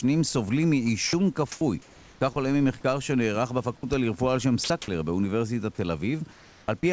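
Speech heard through a wideband call path, with nothing above 8 kHz, which fits a codec such as G.722, over steady room noise about 34 dB below the speech. Three times, at 1.07 to 1.13 s, 3.77 to 3.83 s and 4.64 to 4.70 s, sound dropped by the voice detector is heard. A 60 ms stretch turns into flat hiss. The sender's detector likely judged the sound to be background and stopped transmitting. At 3.77 s about 30 ms of real sound is missing, and at the other two points the full 60 ms is lost. Comfort noise in place of the background appears at 1.52 to 1.61 s (90 ms, no level change), 1.82 to 2.21 s (390 ms, about 2 dB quieter) and 6.32 to 6.68 s (360 ms, about 3 dB quieter). In each of these pauses the real room background, sitting about 26 to 27 dB below the loud passages, gives way to a smooth synthetic hiss with none of its texture, likely because transmission stopped during the silence and the receiver generated filler noise. 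At the end of the first of these pauses, from 1.59 to 1.61 s, an onset clipped by the voice detector cuts the first 20 ms of the returning sound. That sound begins abruptly without its soft lead-in, because the detector likely reacted late and the start was replaced with comfort noise.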